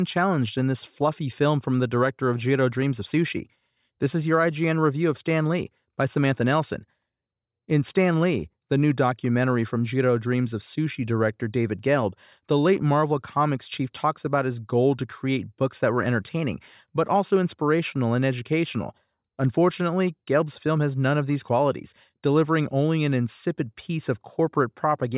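Nothing in this speech recording stood out as technically wrong on listening.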